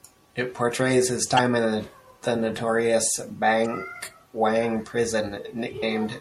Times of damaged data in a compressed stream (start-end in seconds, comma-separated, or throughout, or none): 1.35-1.39, 3.62-3.66, 5.81